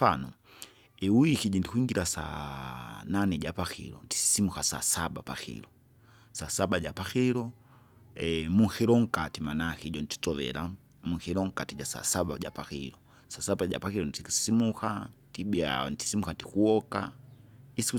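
No dropouts, clicks, distortion or other transport faults are audible anywhere in this speech recording.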